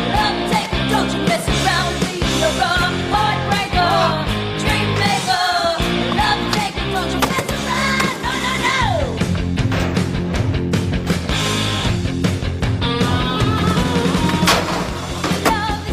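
Nothing here sounds wrong: no glitch, dropout or other technical fault turns up anywhere in the clip.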